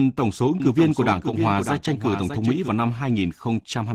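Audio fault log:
Throughout: Opus voice compression. The speech is carried by Opus in hybrid mode at 16 kbps in 20 ms frames, so the low band is modelled by the SILK linear-prediction coder and only a thin CELT layer covers the top of the full band. With so few bits the excitation is coded coarsely, and the damage is plainly audible: the speech turns muffled and hoarse, with a slightly robotic edge and little real detail up high.
0.6 to 2.68 s: doubled audio track. Right after "tổng số ứng", a second full-band copy of the same speech enters abruptly, trailing the original by roughly 0.7 s at about 5 dB lower level, and cuts out just as abruptly at 2.68 s. It carries no decay or room colour, so it is heard as a separate overlapping track and not as an echo. The likely cause is the audio being captured again through a slower path, or an edit leaving two copies out of step.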